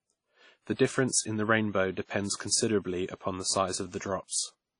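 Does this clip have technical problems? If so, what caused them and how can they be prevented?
Yes. The whole clip sounds like transcoding between lossy codecs, likely an MP3 pass near 67 kbit/s, then WMA near 32 kbit/s. WMA wastes bits on the MP3 artefacts, adds its own, and nothing survives above 10.1 kHz. Encode once from a lossless master.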